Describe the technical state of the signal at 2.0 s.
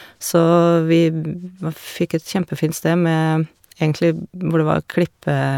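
At 2.0 s the speech signal is intact, with no audible fault at that moment.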